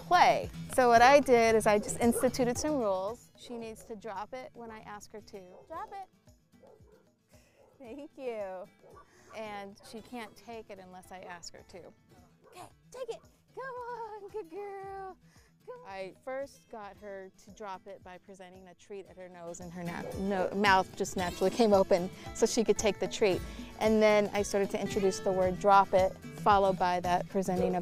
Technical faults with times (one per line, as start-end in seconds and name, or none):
2.56-3.36 zipper noise